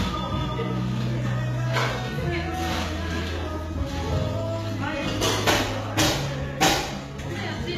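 Throughout, treble is gritty and metallic, likely from HE-AAC compression at a bitrate near 20 kbps; a spectrogram shows repeated, blurred upper bands ending sharply at 14.9 kHz.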